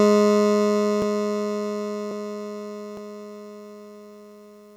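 Dropped buffers (overrun) at 1.02, 2.11 and 2.97 s each give a sudden jump in the music. This is likely the recording side falling behind, so a stretch was overwritten before collection. About 50 ms is lost at the first and about 20 ms at the others.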